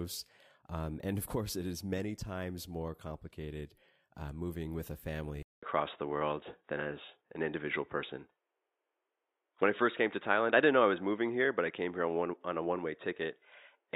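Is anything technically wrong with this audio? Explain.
Yes. At 5.43 s, after a 200 ms gap, the speech loses everything above 3.8 kHz, gains faint new background noise and shifts level by about 5 dB, likely an input switched to a poorer device.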